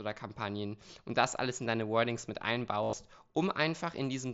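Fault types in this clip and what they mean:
Concealed Bluetooth headset packet loss: Headset packets went missing between 2.82 and 2.93 s. The receiver filled the gaps by repeating recent waveform. About 90 ms was lost across 105 ms. The longest 60 ms run gives a brief buzzy tone, then a slight warble.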